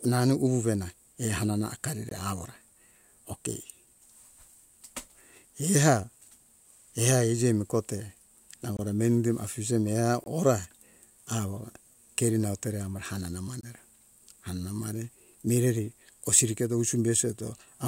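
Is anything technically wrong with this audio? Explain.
Yes. The speech drops out four times, at 2.09, 8.77, 10.24 and 13.61 seconds, each a block of digital silence about 21 ms long. That's the kind of thing you get when the output buffer isn't filled in time and zeros go out instead, and the identical gap lengths fit a 1024-sample buffer. Since the audio snaps to zero and back with no fade, each one comes across as a short, abrupt hole in the speech.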